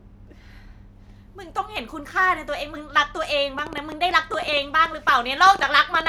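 It's a speech recording, and from 3.59 s to the end at about 6.08 s a train of clicks ticks over it, around 7.7 a second, unevenly spaced, roughly twenty in all, some poking around 5 dB above the speech. That's likely interference from nearby gear or a faulty connection or power supply.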